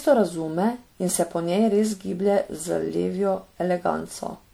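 Speech throughout sounds swirly, smeared and hollow, with blurred consonant attacks, beyond what 96 kbit/s MP3 alone would give: generation loss, likely from roughly seven repeated re-encodes.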